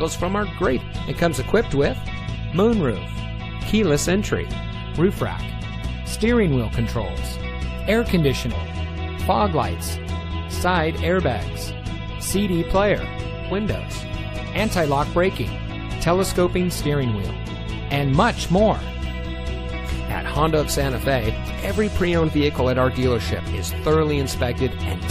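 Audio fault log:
0.80 s and 8.51 s, damaged data in a compressed stream: corrupted bytes made the decoder lose frame sync and hunt for the next header, leaving two brief glitches.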